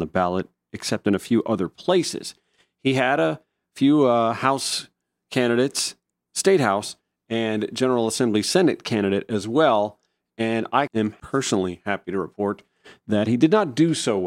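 No technical faults can be heard anywhere in the recording, and the signal stays steady and intact throughout the speech.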